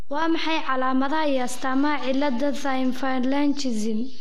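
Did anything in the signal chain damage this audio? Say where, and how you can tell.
Yes. A DC offset runs through the whole speech clip, shifting the waveform off zero by a constant. It is inaudible, but it shows as steady energy at the bottom of the spectrum and eats headroom, pointing to the converter or analogue input stage.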